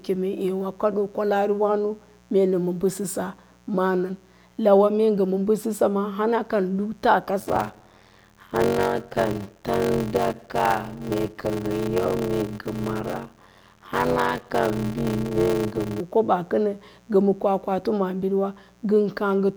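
A 60 Hz mains buzz runs under the speech for the whole clip, sitting well below the speech level. Switching spikes from a dimmer, rectifier or unshielded run inject harmonics of 60 Hz reaching into the kilohertz range, giving a steady, raspy edge.

From 7.39 s to 16.01 s a block size mismatch (padded) occurs. One stage hands over shorter blocks than the next reads, which fits a 512-sample read block, and zeros fill each remainder. The result is a 93.8 Hz buzz, with the speech slowed to 0.625 times normal speed at roughly unchanged pitch.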